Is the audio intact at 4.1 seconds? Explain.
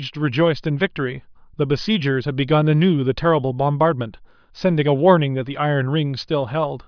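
Yes, the speech plays through 4.1 seconds intact, with no dropout, click, distortion or other fault audible at that moment.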